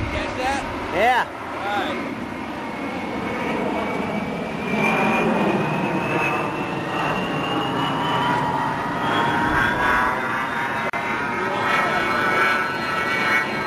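At 10.90 to 10.93 s, a gap at a join of encoded pieces drops about 37 ms of silence into continuous sound, left by untrimmed encoder delay and frame padding.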